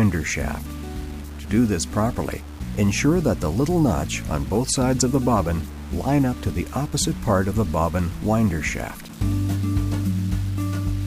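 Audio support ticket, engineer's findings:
Grainy, gritty distortion throughout, tracking the signal level. Quiet passages coarsest, near-silent parts sputter or drop out. Likely low bit depth without dither, rounded to about 6 bits. Error correlates with signal, roughly 25 dB below it.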